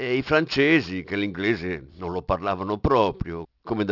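Aliasing runs through the whole speech clip, from start to end. The sound was taken down to a lower sample rate with no low-pass filter first. The result fits a drop from 44.1 kHz to 12 kHz. Everything above 6 kHz folded back below that edge as false, unrelated tones. The folded energy sits around 20 dB under the speech. Sibilants come out gritty and metallic. The top of the spectrum runs hard up to 6 kHz.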